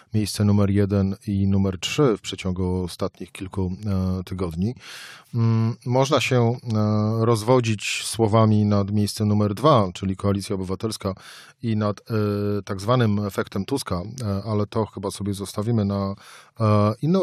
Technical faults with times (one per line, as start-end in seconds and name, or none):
none